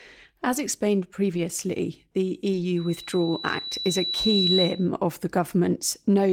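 Speech with two separate problems. At 1.33 to 1.39 s, 2.53 to 2.63 s and again at 4.11 s the sound briefly turns coarse and hissy without ever dropping out. These are lost packets rebuilt from error correction. The stretches of 40 ms, 60 ms and 20 ms fit two, three and one 20 ms Opus packets replaced by the low-bitrate copies carried in the following packets. The absence of a gap or smeared repetition separates this from ordinary loss concealment. From 2.76 to 4.89 s, ending just before "of the", a loudspeaker feedback squeal rises at 3.9 kHz. The microphone is re-amplifying its own loudspeaker, and at that one frequency the loop gain tops unity. Unlike a steady interfering whine, the tone swells by itself over roughly a second and a half until it sits about 5 dB above the speech.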